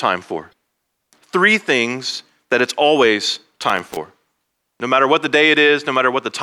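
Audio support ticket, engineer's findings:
Damaged data in compressed stream, 0.49–0.53 s: short glitch right near the top. Corrupt bytes in the coded stream, so the decoder misreads those frames, loses sync and hunts for the next header. Check the file source or transfer path.

Loose connector crackle, 3.64–3.97 s, just after "things that it's always": a third of a second of ragged scratchy crackle. Worn or dirty contact making and breaking as it shifts, chopping the signal. Reseat or swap the cable.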